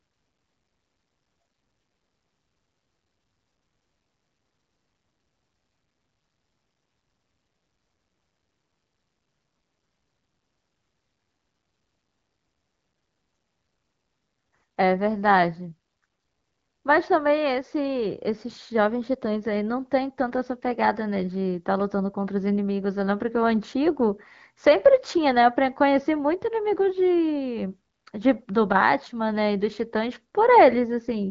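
No technical faults are present.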